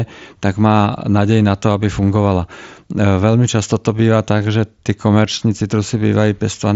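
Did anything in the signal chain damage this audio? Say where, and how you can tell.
No, no faults are audible.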